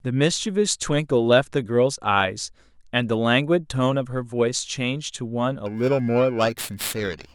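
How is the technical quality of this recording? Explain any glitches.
The speech carries one glitch near the end. From 5.66 s to the close of the clip at 7.34 s, periodic clock jitter adds a rough, metallic edge. The converter's sampling clock is being shaken at a steady rate, around 2 kHz. Each frequency in the speech gains copies about 2 kHz above and below it. Higher frequencies are hit harder, so the brighter sounds turn harsh. The edge disappears in pauses.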